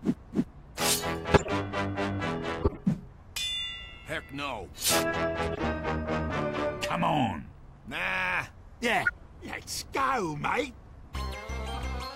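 Corrupt frames were decoded and played anyway at 1.34–1.49, 2.60–2.79, 5.52–5.58, 9.03–9.10 and 11.74–11.82 s. Flipped bits put energy at wrong frequencies across a run of frames each time, heard as a brief chirp, squeak, blip or noise burst, loudest first, quietest last.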